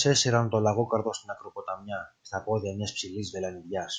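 No technical faults can be heard anywhere in this speech recording. Nothing in the audio stands out as a problem at any point.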